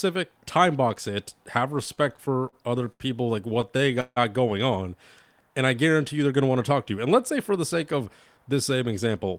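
From 1.95 to 3.02 s, after "time box it have", and again from 3.48 to 4.18 s, before "going on and I", repeated stalls (stutter) occur. The jitter buffer kept running dry, and the receiver stretched the last sound to fill gaps of up to 74 and 159 ms. The speech drags but loses nothing, unlike dropouts. From 6.32 to 8.53 s, after "I guarantee you they're", a jitter buffer speed-up trims pitch periods, running about 6% fast and removing roughly 150 ms. At 9.07 to 9.33 s it runs 12% fast. The pitch stays unchanged, unlike a resampling error.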